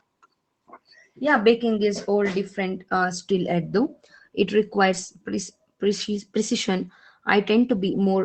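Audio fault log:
4.93–4.99 s lost packet rebuilt from error correction: a short rough, noisier patch with no gap, pointing to two lost packets whose 40 ms was replaced by low-bitrate copies carried in the following packets. The waveform stays continuous; the spectrogram shows smeared, grainier texture below the 8 kHz limit.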